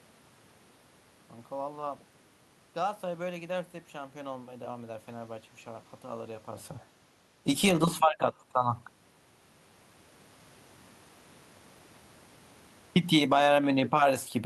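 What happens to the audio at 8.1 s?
Around 8.1 s the automatic gain is falling. From 7.69 s to 8.22 s the gain control judges the input too loud and pulls its level down by about 5 dB, so the sound sinks gradually. The room noise drops by the same amount, which separates this from a talker moving away, where only the voice would fade.

Overlapping this, automatic gain rising begins at 8.12 s and runs to 8.88 s. The control now treats the input as too quiet and lifts it by about 8 dB, so voice and room background swell together, ending louder than before the dip.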